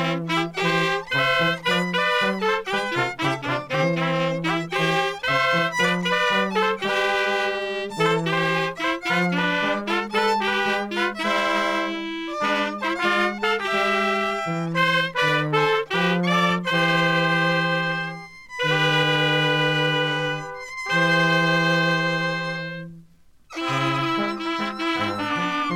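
No technical faults can be heard anywhere in the recording.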